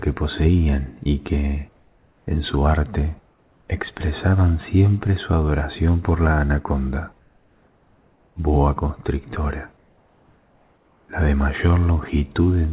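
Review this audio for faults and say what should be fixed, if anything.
At 1.76 to 2.27 s and 3.29 to 3.68 s, the quiet background, about 40 dB below the loudest parts, turns into a flat, featureless hiss about 3 dB and 2 dB quieter, then snaps back when sound resumes. This is comfort noise in place of the background, likely from discontinuous transmission: the sender stopped sending during the pauses, and the receiver filled them with synthetic noise. Everything sits below 4 kHz, which fits a G.711 call codec. Disabling DTX or voice-activity detection on the sending side would keep the real background.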